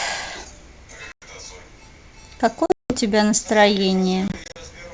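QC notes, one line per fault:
1.12–1.23 s, packet loss on an ADPCM call. About 100 ms cuts to silence with hard edges. The decoder's predictor and step size lose track, so the sound returns slightly distorted, settling within tens of milliseconds.
2.66–2.96 s, packet loss on an ADPCM call. About 220 ms is missing over 240 ms, mostly one 180 ms hole. The mistracked decoder brings the sound back briefly distorted.
4.28–4.57 s, packet loss on an ADPCM call. About 120 ms drops out in short gaps of up to 40 ms across 280 ms. The sound turns choppy, with slight distortion after each gap.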